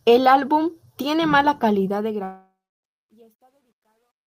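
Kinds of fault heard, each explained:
Truncation distortion on a fade: The fade-out here runs through a stage that keeps only about 11 bits with no dither. From 1.83 s, right after "álbum tiene mala", the tail grows grainy as the level sinks toward the smallest steps and the waveform gets blocky. From about 2.84 s to the end at 4.27 s it's at its worst and sounds gritty.
Long network dropout: From 2.23 s to 2.86 s the sound stops being real audio. The last bit gets stretched into a fading buzz or hiss for about 0.6 s, and roughly 0.29 s of that ends up as plain silence. When the audio picks back up, about 0.6 s of material is simply gone rather than delayed. The likely cause is a long stretch where no packets reached the receiver, which papered over the gap and then skipped ahead.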